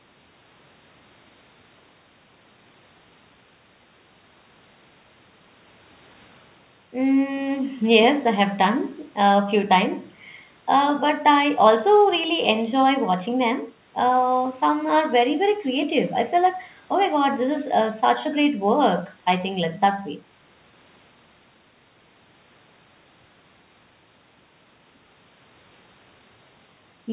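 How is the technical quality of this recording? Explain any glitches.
No glitches or faults audible.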